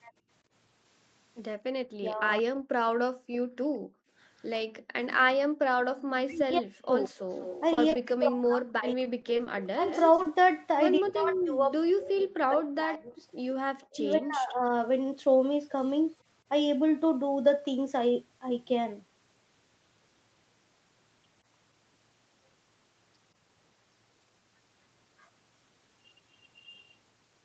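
Around 1.58 to 1.62 s there's a quick case of background gated by the echo canceller. While the far end was playing, the canceller pulled the mic down by about 15 dB, so the room tone briefly dips and then springs back.

From 1.9 to 2.45 s the talker's voice gets chopped, which is likely speech suppressed in double talk. With both sides talking, the canceller couldn't tell the near voice from loudspeaker echo and ducked everything, by something like 40 dB at worst and for a few hundred milliseconds in total.

The gating comes back, much harder, from 2.73 to 5.99 s. The background drops by up to about 37 dB in pieces adding up to roughly a second, each dip lifting once the canceller releases.

From 6.27 to 9.9 s what is likely double-talk suppression returns, with the voice dipping, going dull or breaking up for around two seconds in all. Overlapping that, from 6.34 to 7.61 s, there's an echo leak: a faint copy of the voice trailing 187 ms behind, about 15 dB down. 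The loudspeaker side's canceller likely didn't fully remove its own loudspeaker pickup.

At 7.73 to 7.79 s a short concealed packet loss smears over a 40 ms hole, as the decoder extended the last sound to fill it. Right after, two short stalls from a late packet, at 7.89 to 7.93 s and 7.93 to 7.97 s, each hold the sound for 20 ms while the jitter buffer waits, so you hear a slight drag but nothing is lost.

From 9.03 to 9.48 s comes repeated packet loss with a robotic sound. Four small holes, none longer than 20 ms, are each patched, giving a choppy texture over about a sixth of that stretch.

The echo leak shows up again from 9.87 to 10.0 s, with the same 187 ms lag.

Two more concealed losses follow at 10.16 to 10.20 s and 10.22 to 10.26 s, each a 20 ms smear.

The last fault runs from 10.99 to 14.72 s, where what is likely double-talk ducking breaks up the voice for roughly three seconds. 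Throughout the clip the audio stops at 8 kHz, which fits the Opus call path and its wideband setting.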